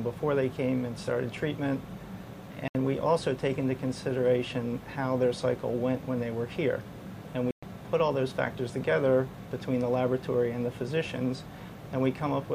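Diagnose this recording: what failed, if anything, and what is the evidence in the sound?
Bluetooth dropout, at 2.68 to 2.75 s and again at 7.51 to 7.63 s. The stage is the wireless link to playback. The sound cuts to silence for about 70 ms and then about 116 ms. When it returns, it has moved on, as though it kept playing through the gap. The likely mechanism is packets arriving too late at the headphones and being discarded. The two gap lengths fit a handful of lost packets each.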